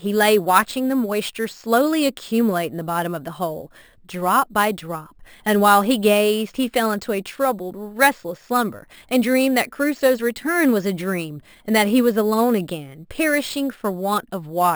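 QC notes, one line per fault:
Throughout, imaging from sample-and-hold upsampling: a bright, metallic fizz rides on top of the speech, rising and falling with its level and sitting about 18 dB below it. The lowest mirror band spans 6 kHz to 12 kHz, which fits a 12 kHz source raised to 44.1 kHz by repeating each sample with no smoothing filter. Folded copies of the spectrum therefore leak above the old Nyquist limit.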